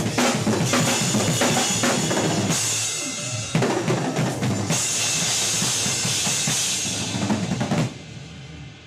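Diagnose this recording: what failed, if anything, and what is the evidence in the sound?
Nothing failed here as far as I can hear: there's no stage in the chain that gives itself away, and the sound comes across steady and intact the whole way, so there's simply nothing to diagnose.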